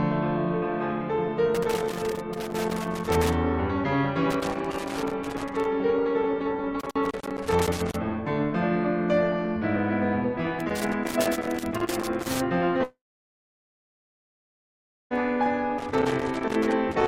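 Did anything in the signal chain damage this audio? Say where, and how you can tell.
Yes. Two separate stages damaged this music clip.

The analogue wiring shows a loose connector crackle in five irregular bursts: 1.55 to 3.35 s, 4.30 to 5.65 s, 6.80 to 7.96 s, 10.60 to 12.40 s, and 15.78 s to the end. A worn or dirty contact shifting in its socket makes and breaks the circuit unevenly. This chops the music and adds pops from any DC on the line. On a spectrogram these bursts appear as scattered vertical broadband streaks. The waveform shows jagged spikes and brief gaps.

The second fault is a long network dropout from 12.83 to 15.13 s. About 2.3 s of music never arrived, likely because packets were lost on the network. The receiver briefly extends the last sound as a fading buzz. For about 2.1 s of the gap there is only silence or low steady noise, and then the music resumes further along, without the missing part. 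On a spectrogram this shows as a short smear, then an empty band, then an abrupt restart.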